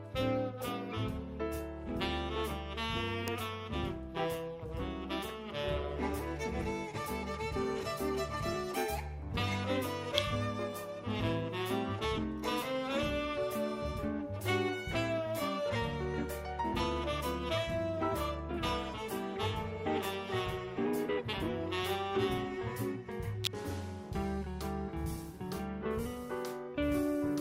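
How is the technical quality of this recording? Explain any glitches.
The recording has three electrical switching spikes, at 3.28 s, at 10.18 s and from 23.44 to 23.47 s. A nearby switch or motor likely arced briefly onto the audio line, adding sharp snaps that peak around -15 dBFS at first and around -10 dBFS later. The last one is much longer, about 27 ms.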